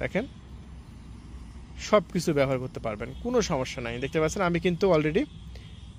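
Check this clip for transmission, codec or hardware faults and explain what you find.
Nothing in the clip points to a transmission, codec or hardware fault. There is no event here that needs explaining.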